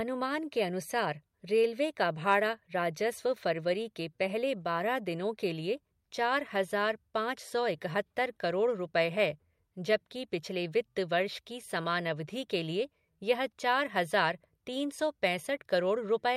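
No technical faults can be heard anywhere in the recording.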